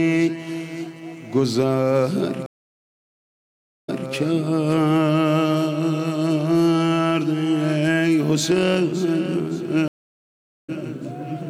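The audio has two stream reconnect dropouts. At 2.46 s it goes dead for about 1.42 s, and when sound returns at 4.10 s the player has jumped back about 0.22 s, so a short stretch repeats, which fits the server resending a burst after the link came back. At 9.88 s it cuts out again for 0.8 s and resumes at 10.70 s roughly 0.4 s further on, so a bit of audio is simply skipped. Each time the connection dropped and the player restarted its decoder mid-stream.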